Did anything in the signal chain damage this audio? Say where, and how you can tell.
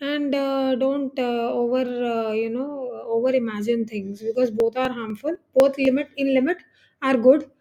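Yes. Between 4.35 and 6.10 s the speech has periodic USB or driver dropouts: about seven tiny ticks every 0.249 s, each losing well under a millisecond of audio. The strict spacing points to a recurring bus or driver stall rather than irregular network packet loss.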